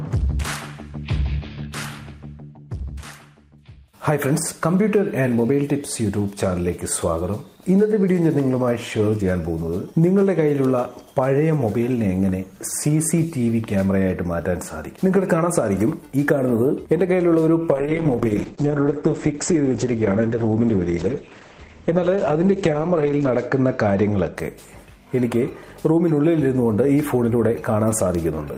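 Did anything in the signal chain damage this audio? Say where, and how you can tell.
Yes. Two sharp, isolated ticks land at 10.65 s and 28.15 s. Each is broadband and unrelated to the surrounding sound. These are bit error spikes: a flipped bit in storage or on a digital link throws a few consecutive samples off by a power of two before they snap back.

From 17.73 s to 24.41 s the sound turns rough and muffled. The top end collapses from about 20 kHz to 8 kHz, at its worst for roughly 5.7 s. This is a call bitrate drop in the call processing. The bandwidth estimate fell, so the Opus encoder coded more coarsely, which fits a fall from about 32 to 9 kbps.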